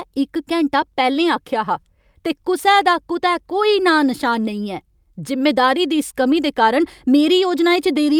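No technical faults occur anywhere in the recording.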